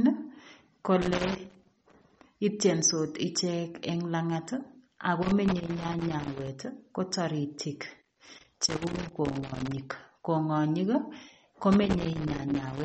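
The speech has most likely been through MP3 compression at a low bitrate, with damage audible from start to finish. Starved of bits, the encoder drops weaker frequency lines frame by frame and removes everything above about 8.4 kHz. The sibilants lose their top end, and the lines that come and go leave a watery, swirling texture with smeared consonant attacks. The sound points to a rate of around 32 kbps.

Loose connector crackle comes in four bursts. A worn or dirty contact keeps making and breaking as it shifts, chopping the signal and letting any DC on the line jump, which produces irregular scratching and popping. The first burst runs from 1.02 to 2.23 s, just before "itiensot ichek eng langat". The second runs from 5.22 to 6.48 s, just before "ko taritik", and the third from 8.02 to 9.82 s, right after that same phrase. The last starts at 11.72 s and continues to the end of the clip.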